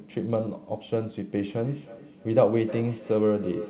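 From 1.36 s to the end at 3.69 s, the speech picks up a feedback echo between two devices. One device plays what the other's microphone sent, that microphone hears it again, and neither echo canceller removes the other device's output. Copies of the speech return about a third of a second apart, at most about 13 dB below the direct sound. On a waveform, fainter repeated envelopes trail each burst. On a spectrogram, shifted ghost copies repeat in time, all capped at 4 kHz like the rest of this narrowband call audio.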